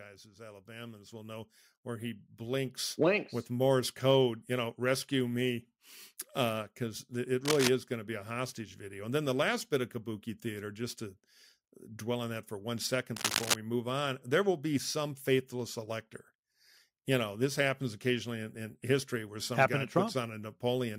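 From 0.23 to 3.92 s, automatic gain rising lifts speech and background together by about 13 dB before "code you know rescue", so the waveform envelope visibly swells. At 7.45–7.68 s, before "is going to be", and at 13.16–13.55 s, between "on that for one" and "move on", bursts of cable scratch noise, likely from a worn contact, rasp at roughly speech level, showing as ragged broadband smears on the spectrogram.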